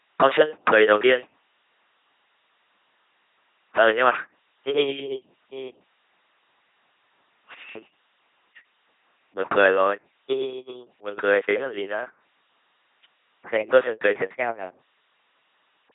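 Speech passed through an LPC-10 vocoder for the whole clip, so it sounds like a buzzing, mechanical robot, with stray hiss or buzz wherever voicing is misjudged. The heavy damage fits a 2.4 kbit/s coder. A spectrogram shows blurred formants, rigid harmonic combs or flat noise, and nothing above 3.8 kHz.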